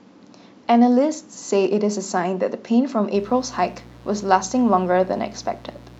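Speech, with mains buzz entering at 3.15 s and running to the end: a steady, raspy buzz built on 60 Hz, about 25 dB below the speech. Switching spikes from a dimmer, rectifier or unshielded cable arrive twice per cycle, so a spectrogram shows evenly stacked horizontal harmonic lines climbing into the kilohertz range.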